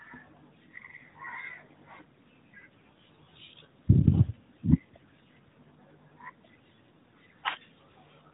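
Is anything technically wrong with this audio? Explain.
No, nothing stood out as wrong when listening to this speech.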